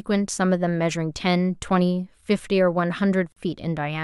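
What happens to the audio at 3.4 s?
Between 3.32 and 3.37 s the speech drops out for about 44 ms: a gap between stream segments. The timestamps of adjacent segments, which fit a 4-second segment length, leave a hole that the player fills with silence, heard as a hard-edged break with no audio lost.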